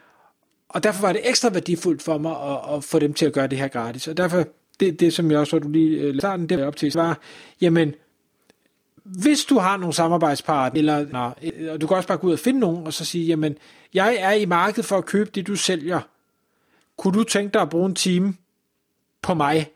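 Speech with frames out of order at 6.20–6.94 s and 10.75–11.50 s. In each, two neighbouring 371.5 ms blocks, which fits runs of four frames, play swapped, producing a garbled flutter. Spectrograms show formant tracks breaking abruptly there.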